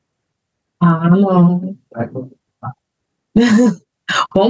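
Gain pumping runs throughout the speech: the gain swings by roughly 15 dB, pulled down under louder syllables, likely from a fast limiter fighting excessive microphone gain.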